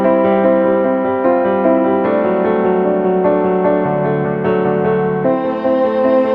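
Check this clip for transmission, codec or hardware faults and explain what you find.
Nothing in the clip points to a transmission, codec or hardware fault. There is no event here that calls for a time, a value or an explanation.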